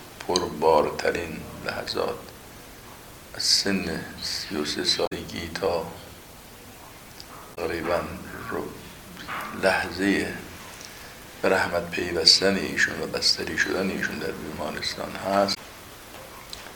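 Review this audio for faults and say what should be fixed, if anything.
Damaged data in a compressed stream at 5.03–5.13 s, 7.51–7.58 s and 15.51–15.58 s gives brief glitches lasting 70–100 ms. Corrupted frames throw the decoder out of sync until it locates the next frame header. Checksummed, error-checked transfer and storage would prevent this.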